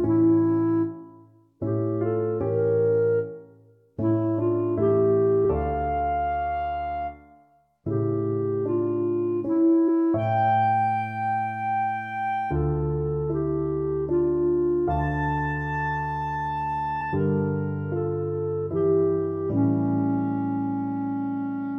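At 5.44 s, 9.88–9.90 s and 17.00–17.02 s, compressed frames are skipped: the audio jumps ahead by roughly 70, 100 and 100 ms respectively.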